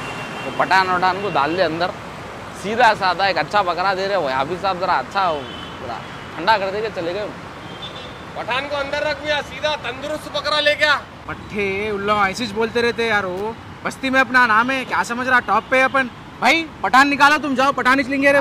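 A short, irregular burst of crackle and scratching cuts into the sound from 13.37 to 13.41 s, lasting about 40 ms. This is loose connector crackle: a worn or dirty contact somewhere in the signal chain is briefly losing and regaining connection as it shifts. Each break chops the signal into rough fragments, and the rapid making and breaking gives the burst its ragged, uneven scratchy texture.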